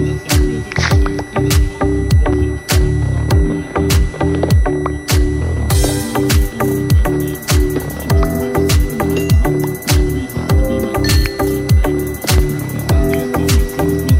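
A switching power supply in the chain is running in an audible burst mode or beating with another supply for the whole clip, leaking a switching whistle into the audio. It sits near 2 kHz, wandering between about 1.94 and 2.02 kHz, roughly 20 dB below the sound.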